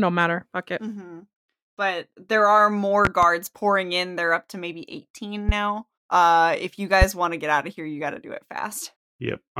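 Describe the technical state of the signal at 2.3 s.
At 2.3 s the speech signal is intact, with no fault present at that moment.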